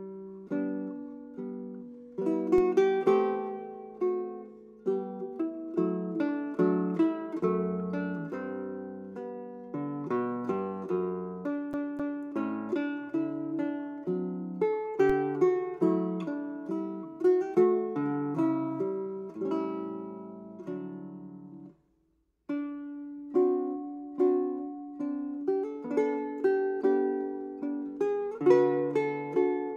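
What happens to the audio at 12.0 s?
A CD stuck on one turn runs from 11.73 to 12.25 s: a scratch knocks the laser back a track, so the same 0.26 s segment plays twice, with brief mutes at each jump.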